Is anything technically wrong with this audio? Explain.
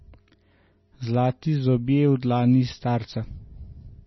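Yes. Throughout the speech, the audio sounds watery and swirly, and nothing is present above 5.9 kHz, so s sounds are dull. This is likely heavy MP3 compression at a bitrate around 24 kbps, where the encoder cuts the treble and drops weak frequency lines that flicker between frames.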